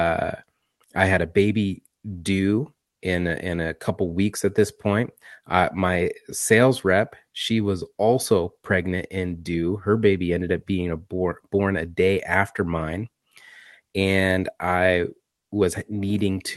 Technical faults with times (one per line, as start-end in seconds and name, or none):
none